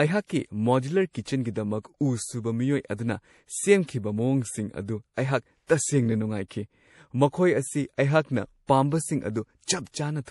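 Throughout the speech there is plainly audible damage that sounds like MP3 compression, most likely at a low bitrate; the sound fits something around 48 kbps. With bits scarce, the encoder drops weaker frequency lines that flicker in and out between frames, giving a watery, swirling texture, and s sounds turn chirpy. On a spectrogram the energy stops flat at 11.5 kHz, and the region below shows patchy, blocky holes that switch on and off over time.

At 5.67 s, just after "ꯑꯗꯨ ꯑꯩꯍꯥꯛ", a pre-echo appears. A sharp attack landed late in a transform block, and the quantisation noise meant for the loud onset was spread across the whole block, including the quiet stretch before it. The result is a brief hiss about 27 ms long leading into a softened, smeared attack. The waveform shows a thin noise smear ahead of the onset, and the spectrogram shows a broadband wash just before it.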